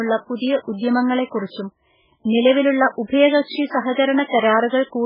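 Speech, with heavy MP3 compression damage throughout: it sounds watery and swirly, with nothing above 5.2 kHz, which likely comes from encoding at a very low bitrate around 8 kbps. A spectrogram shows a flat ceiling at 5.2 kHz and weak components flickering on and off between frames.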